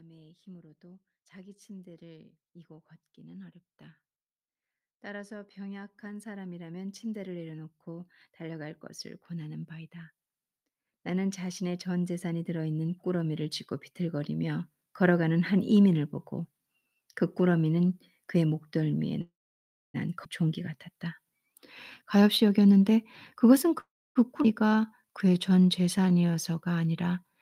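Speech runs through two spells of automatic gain rising. From 0.05 to 3.6 s the level climbs by about 6 dB. From 5.0 to 15.57 s it climbs by about 20 dB. The control judged the input too quiet. It raised its gain slowly, so voice and background swell together.

Two call audio freezes follow, at 19.21 to 19.96 s and at 23.8 to 24.17 s. Each begins with a brief fading continuation of the last sound. Then silence takes over, lasting 620 ms in the first and 280 ms in the second. Delayed packets likely starved the jitter buffer. The audio then resumes where it stopped, with nothing lost but 726 ms and 354 ms of added delay.

Each freeze is soon followed by a skip ahead. The first is at 20.24 to 20.27 s and the second at 24.43 to 24.46 s. Playback jumps forward almost without a gap. Roughly half a second is dropped at the first jump and roughly a fifth of a second at the second. This cuts out delay the freeze had built up.

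From 22.02 to 23.75 s a jitter buffer speed-up runs the speech at 108 % with the pitch unchanged. The receiver trimmed many short pitch-period pieces, removing roughly 150 ms in all, so the delivery sounds hurried.

From 24.69 to 26.51 s a jitter buffer slow-down does the reverse. Repeated pitch periods add 227 ms and play the audio at 88 %. Sounds drag out at the same pitch while the buffer rebuilds its reserve.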